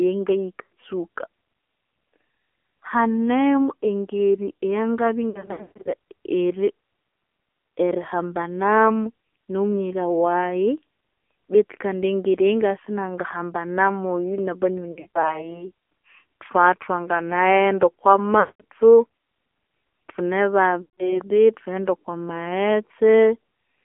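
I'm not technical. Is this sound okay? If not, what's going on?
No. The speech went through an AMR narrowband mobile codec, an old phone-network compressor, so it sounds muffled, thin and plainly buzzy and artificial throughout.

There are also lost AMR speech frames. Radio errors dropped bits of the signal, and the phone filled each gap by stretching the last good sound and fading it. This causes brief warbles or dropouts at 0.62–0.72, 5.30–5.93 (the worst), 14.92–15.53, 18.40–18.62 and 20.82–21.21 seconds.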